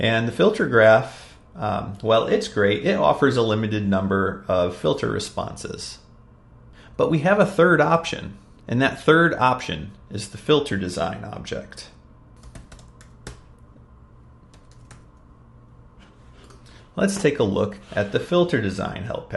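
Nothing stood out on listening; no technical fault could be heard at any point in the recording.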